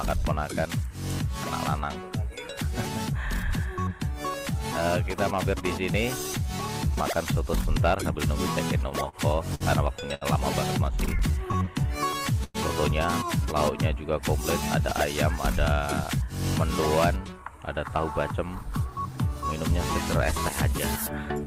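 Late packets left the jitter buffer empty three times, producing a short stall from a late packet at 9.09 to 9.16 s, 9.55 to 9.63 s and 10.14 to 10.24 s. Each time the last sound is held for 40, 55 and then 71 ms before resuming where it stopped, heard as a brief smeared hold with a faint buzz or dip.

From 10.93 to 12.57 s packets kept arriving behind schedule, so the buffer ran dry twelve times in a row, giving repeated stalls (stutter). About 13% of that span is stretched-out filler, with the longest hold 105 ms. The sound drags and stutters, fading during the longer waits.

Between 17.24 and 19.00 s the jitter buffer speed-up trims the backlog by repeatedly cutting out pitch-period slices, about a fifth of a second in all. The audio plays roughly 10% faster at unchanged pitch and sounds noticeably hurried.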